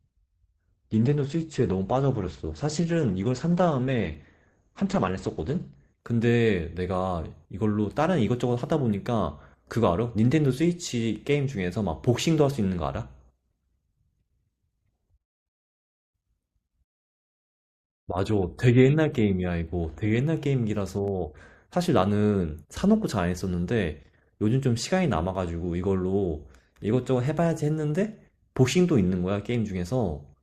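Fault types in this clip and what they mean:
Adaptive stream starting at a low bitrate: dull, smeared sound with missing treble until 6.0 s, then a sudden gapless improvement, consistent with a low-rate Opus start.
Dropped samples: single sharp clicks at 21.08 s and 29.55 s, likely from a tiny fraction of a millisecond of audio missing, so the waveform jumps.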